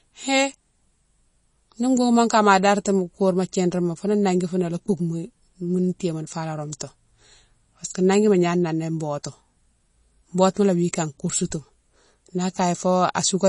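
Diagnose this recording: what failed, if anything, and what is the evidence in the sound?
The codec stage is at fault, likely MP3 compression. Throughout the speech, nothing sounds above 10.5 kHz. Plainly audible watery swirl fits a low bitrate around 32 kbps.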